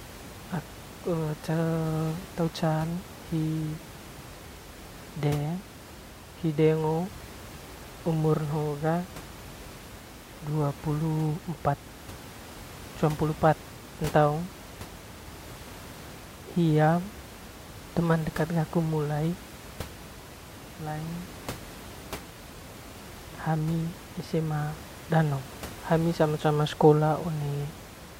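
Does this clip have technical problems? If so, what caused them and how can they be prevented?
No, there's nothing technical to fix or prevent here; the speech comes through fine, with just a bit of ordinary room background sitting about 17 dB below it.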